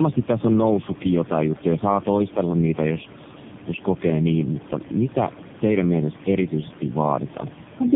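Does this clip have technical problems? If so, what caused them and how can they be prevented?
Yes. The speech sounds rough, muffled and warbly throughout, with nothing above 3.5 kHz. This is tandem speech coding: the call passed through three speech codecs in a row, GSM full rate and then AMR-NB twice, with G.711 links between them, so each coder re-encoded the already degraded output of the previous one and the artefacts compounded. Prevention: keep the call in one codec end to end, using transcoder-free operation where the network supports it.

Two sharp single clicks occur, at 2.39 s, after "noussutkin jotain juttuja saa" and before "niitä jos jos kokee", and at 4.34 s, after "niitä jos jos kokee" and before "mutta mitä teidän mielestä". They sound like dropped samples, likely a single sample or so missing each time, making the waveform jump abruptly without removing any audible sound. 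Prevention: use adequate buffering and correct clock handling so the stream never skips samples. Room noise sits about 17 dB below the speech.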